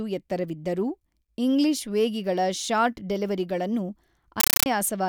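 Compressed stream played as audio from 4.40 to 4.66 s in this speech clip: loud chattering static of 9.33 ms noise bursts at 31.25 Hz, which fits an undecoded AC-3 stream.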